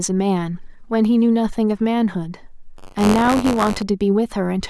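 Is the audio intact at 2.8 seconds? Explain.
No. Buffer tearing runs from 2.76 to 3.82 s. The writer and reader of the ring buffer have drifted and cross each period. A small slice of each buffer replays audio about 20 ms old, with hard joins. This gives a robotic buzz near 94 Hz, which fits a 256-sample buffer.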